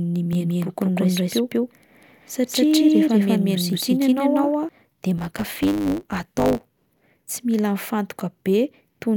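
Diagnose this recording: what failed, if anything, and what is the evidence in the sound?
From 0.33 s to 4.69 s the speech carries a doubled audio track: a second full-band copy at roughly the same level trails the original by about a fifth of a second, with no decay or room colour, and it starts and stops abruptly. The likely cause is a second, slower capture path mixed back in. On a spectrogram every syllable's harmonic pattern repeats, shifted right by that fixed gap. The waveform shows each onset twice.

Between 5.17 s and 7.13 s a block size mismatch (truncated) appears at the driver or buffer stage. One stage writes longer blocks than the next reads, so each block's tail is discarded. This leaves a 100 Hz buzz at the block rate, and the speech runs 1.09 times fast while keeping about its normal pitch. The spectrogram shows thin vertical lines every 10 ms. The waveform shows small discontinuities at the same spacing.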